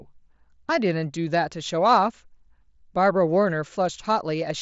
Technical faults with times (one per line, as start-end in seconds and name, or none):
none